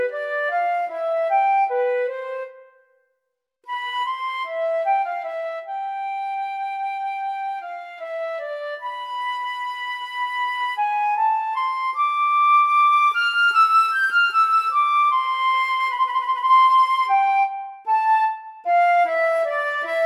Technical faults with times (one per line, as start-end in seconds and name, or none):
none